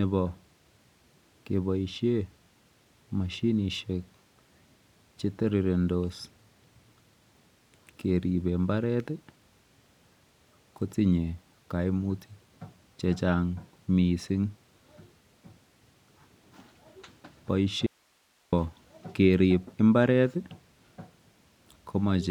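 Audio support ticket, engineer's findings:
Audio dropout to a faint residue, 17.86–18.53 s: speech cuts abruptly for 0.66 s, leaving only hiss roughly 40 dB below program. Likely a momentary break upstream with the downstream path still live. Hard edges and retained hiss distinguish it from a pause or fade.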